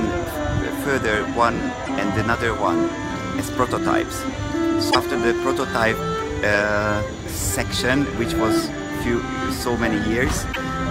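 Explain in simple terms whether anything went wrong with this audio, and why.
Damaged data in a compressed stream: a few small patches of the stored file were corrupted, so the decoder misread those frames and had to find its place again. Each patch comes out as a brief chirp or blip, at 1.82–1.90, 4.87–4.96 and 10.49–10.57 seconds.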